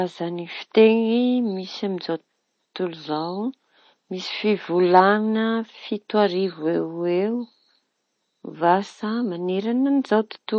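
Throughout the speech, swirly, smeared artefacts and patchy spectrogram detail persist: low-bitrate audio saved at a high bitrate, likely 32 kbit/s MP3 re-encoded at 256 kbit/s.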